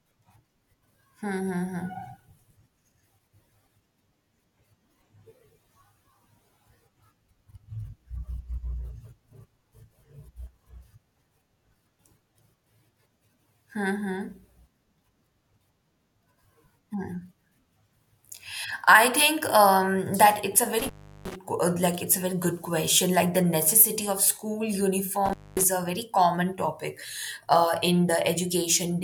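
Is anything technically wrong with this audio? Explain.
Yes, the speech has an intermittent contact fault twice: from 20.79 to 21.36 s, with the line open for about 0.36 s, and from 25.26 to 25.64 s, open for about 0.24 s. A loose plug or cable briefly loses connection, so the sound cuts out, leaving faint hiss. Crackle at each break and reconnection distinguishes this from a clean digital dropout, which falls to silence without scratchy edges.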